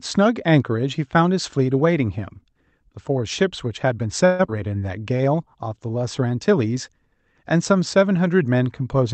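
A speech clip in which, from 4.25 to 4.41 s, the sound stalls and its last moment is stretched into a fading buzz for about 137 ms before carrying on exactly where it stopped. This is a call audio freeze, likely from packets held up in transit until the jitter buffer ran dry, so a gap was inserted while nothing was lost. Just after, at 4.47 to 4.50 s, the audio jumps forward abruptly. About a tenth of a second of speech is gone, and the two sides are stitched together almost seamlessly. This skip ahead happens when a stretch of audio is dropped while later audio is already queued, so playback leaps past it. From 4.99 to 5.99 s the speech drags at roughly 90% speed without any change in pitch, with sounds drawn out, as about 104 ms of repeated pitch periods are spliced in. That is a jitter buffer slow-down, rebuilding its reserve. Throughout, the Opus call path's 8 kHz bandwidth limit keeps the top end dull.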